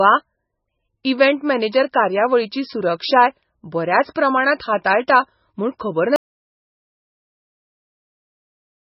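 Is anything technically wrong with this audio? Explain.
Yes, there are two faults.

Throughout the speech, nothing sounds above 5.6 kHz, and the remaining band is heavily damaged: watery, swirling and smeared on attacks. This is likely MP3 compression at a very low bitrate, around 16 kbps. The flickering tonal artefacts distinguish it from a clean low-pass filter.

From 6.16 s to the end, the sound stops abruptly as an audio dropout to silence. The gap is silent with no room tone or noise floor, which sets it apart from a fade or a noise gate. Most likely the input was lost while recording continued.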